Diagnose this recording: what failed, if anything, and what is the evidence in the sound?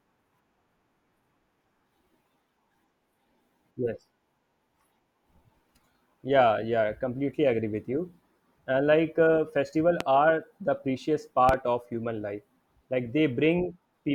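A voltage transient, most likely from a plug being disturbed, a switch or a static discharge in the analogue wiring, broke into the signal path twice. It shows up as a loud pop from 10.00 to 10.04 s, then a double pop from 11.49 to 11.57 s, each peaking about 15 dB above the speech, which continues underneath. The sudden step is shaped by the following circuitry into a sharp thump, and the second event landed as two closely spaced pulses.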